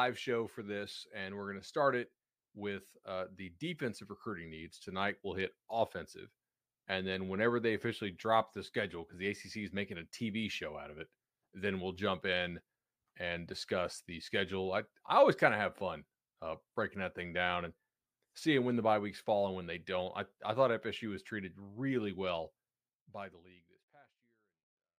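The speech signal shows no technical faults, and it ends with an ordinary smooth fade-out that begins around 23 s and lowers the level gradually with no click or hard edge.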